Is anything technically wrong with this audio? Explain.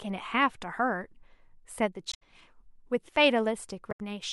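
Yes. At 2.10 to 2.23 s and again at 3.91 to 4.00 s the speech breaks into a short glitch. This is damaged data in a compressed stream: corrupted bytes make the decoder misread those frames and lose sync until it finds the next valid frame header.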